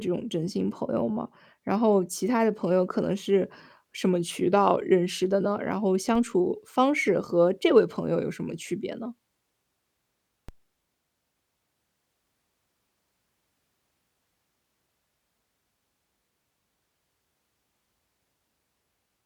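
A low thump cuts into the speech at 6.15 s and again at 10.49 s, each a DC step of about -29 dBFS: the waveform's zero line jumps suddenly, then drifts back as a 20 Hz high-pass bleeds the offset away, while the speech continues unchanged.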